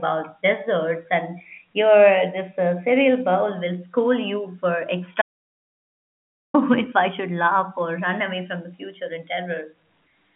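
Right after "will scold you for", the speech cuts to dead digital silence from 5.22 to 6.54 s, with no room tone. This is an audio dropout to silence, likely a lost input while zeros kept being written.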